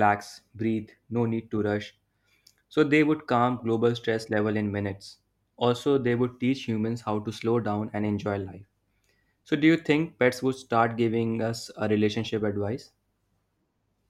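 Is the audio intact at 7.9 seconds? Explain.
No. From 6.8 to 8.9 s, just after "they would teach", the resampler restarted on every block, converting each 100 ms block from 48 kHz to 44.1 kHz without its true neighbouring samples. Each block edge gains a small error, heard as steady ticks at 10 Hz over the speech.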